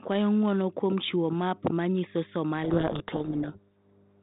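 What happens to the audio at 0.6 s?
A steady low drone at 50 Hz sits under the speech at 0.6 s, as it does throughout the clip, roughly 20 dB below the speech level. This is mains hum: a ground loop or nearby transformer leaking the power-line frequency into the signal path.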